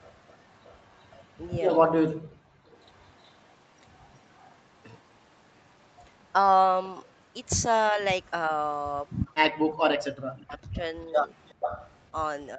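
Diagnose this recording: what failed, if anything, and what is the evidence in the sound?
Echo leak, in the call processing stage. A delayed copy of the sound returns about 368 ms late, very faint, from 0 to 7.15 s. It comes back much louder, 379 ms late, from 9.08 to 12.01 s. The likely cause is the far end's canceller leaving loudspeaker pickup in its microphone signal.

Background gated by the echo canceller, also in call processing. From 2.15 to 2.68 s the room sound drops out for about half a second, falling by about 38 dB. It then returns. The canceller clamped the microphone while its loudspeaker was playing.

Speech suppressed in double talk. At 7.92 s there is a brief, slight dip lasting about 70 ms. From 9.83 s to the end the talker is cut deeply. This is likely the canceller ducking everything while both sides spoke at once.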